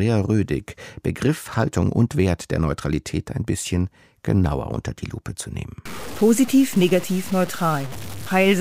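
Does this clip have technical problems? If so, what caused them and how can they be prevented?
Yes. From 5.85 s after "zu nehmen" to the end, the sound turns grainy, with distortion that tracks it and an error roughly 15 dB below the signal, likely from truncation to about 5 bits without dither, so low bit depth without dither. The waveform shows coarse staircase steps, and the spectrogram shows signal-following hash smeared across frequencies. Keep at least 16 bits and add dither whenever reducing bit depth.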